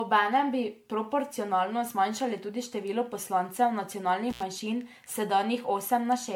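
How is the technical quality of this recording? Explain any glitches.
Technical quality is compromised by two faults. Throughout the speech there is generation loss, likely from roughly ten successive MP3 encodes near 98 kbit/s. Each new pass re-quantises on a shifted frame grid, so the errors stack up and the sound becomes swirly, hollow and smeared, with softened consonant attacks. On a spectrogram this shows as patchy holes and a smudged texture, with nothing above about 19.9 kHz.

From 4.3 to 4.42 s there is an intermittent contact: a loose connection breaks for about 84 ms. The audio drops out between crackles at each edge, leaving only faint hiss. The waveform shows a near-flat gap framed by sharp spikes, and the spectrogram shows a thin vertical band of broadband clicks on either side.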